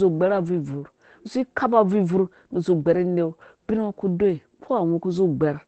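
Around 1.35 to 1.37 s, and again from 2.91 to 2.97 s, there's a lost packet rebuilt from error correction. The decoder filled each hole with a low-bitrate backup copy, so nothing drops out, but those stretches turn briefly rougher and noisier.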